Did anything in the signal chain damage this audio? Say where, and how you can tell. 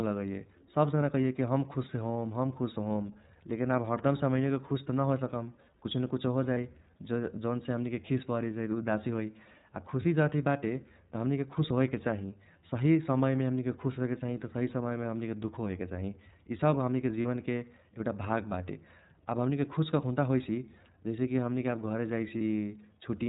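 Yes. The codec stage shows throughout. This is iLBC, a narrowband VoIP codec, and its damage is plainly audible as a slightly rough, synthetic edge on the speech. On a spectrogram everything stops at a hard 4 kHz ceiling. The frame texture fits iLBC's 30 ms mode at about 13.3 kbps.

The network stage shows as lost iLBC frames at 6.54–6.58 s, 17.22–17.26 s and 22.38–22.41 s. Each gap lasts 30 ms, which fits a single lost frame. The decoder fills it by repeating the last pitch cycle with noise, so each gap sounds like a brief held, buzzy vowel. On a spectrogram each shows as a frozen harmonic patch, and the waveform shows one cycle repeated before normal speech returns immediately.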